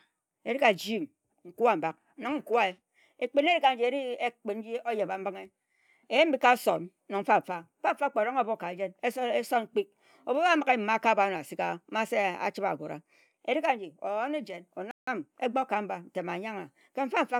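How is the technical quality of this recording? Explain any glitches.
One glitch stands out in the speech. From 14.91 to 15.07 s there is a playback stall: the sound cuts out mid-flow for about 0.16 s, most likely because the player ran short of data or was briefly blocked, then resumes. A waveform shows a flat gap there, and a spectrogram a blank vertical band.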